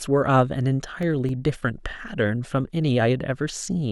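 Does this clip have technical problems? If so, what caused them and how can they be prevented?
Yes. The speech carries CD scratch ticks: eight short clicks between 0.76 and 2.61 s, about four per second, each only a few milliseconds long. A disc blemish exceeds the error correction once per revolution, so the player conceals it. Cleaning or resurfacing the disc, or re-ripping with a secure-mode extractor, prevents this.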